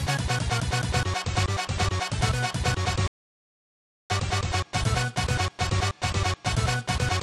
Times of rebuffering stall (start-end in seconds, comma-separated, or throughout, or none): 3.08-4.10